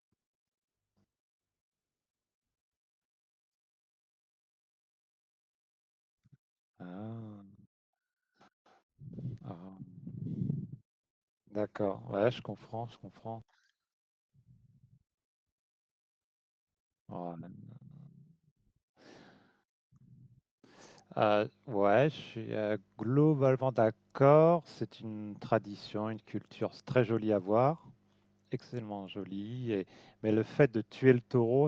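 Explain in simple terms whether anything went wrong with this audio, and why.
From 11.6 to 15.1 s, a call bitrate drop made the speech encoder use far fewer bits, so the speech turns rough and muffled, worst for about 2 s.

From 14.4 to 17.2 s, a jitter buffer speed-up trimmed tiny slices to cut delay, so speech runs about 5% faster at the same pitch, sounding slightly hurried.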